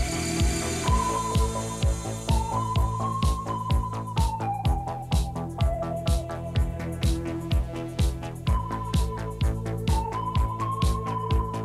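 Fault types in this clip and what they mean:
Nothing stood out on listening; the audio raised no concerns at any point.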